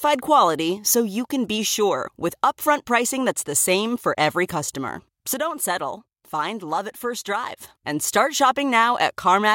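A digital gain change, likely applied in one step with no ramp, cuts this speech clip by about 6 dB from 5.34 to 7.57 s. Right after "same for every customer", voice and background noise drop together abruptly, then jump back up before "and start".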